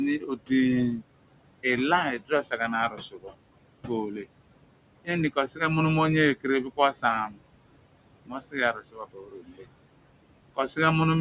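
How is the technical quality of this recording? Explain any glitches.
The recording has two related problems, both caused by noise suppression. They sit on narrowband call audio with nothing above 4 kHz, consistent with telephone-grade coding, and on room noise about 14 dB below the speech.

Noise suppressor artifacts run through the whole clip. The suppressor estimates steady background noise and pulls those bands down by about 21 dB, frame by frame. The background therefore sinks in the gaps and swells back under the speech.

Speech cut by the noise suppressor occurs at 0.19–1.05 s, 2.18–4.26 s, 5.04–5.61 s, 6.36–7.39 s and 8.26–9.65 s. The suppressor mistakes quieter speech for noise and drops it by up to about 20 dB (about 15 dB in the fourth span), so consonants and word endings sound swallowed. The last span is the worst, with roughly a second affected.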